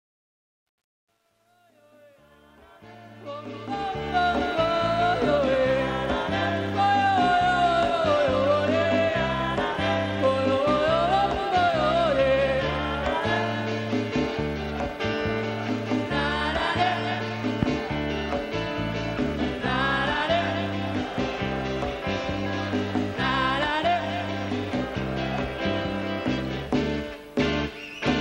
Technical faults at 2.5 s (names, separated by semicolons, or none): truncation distortion on a fade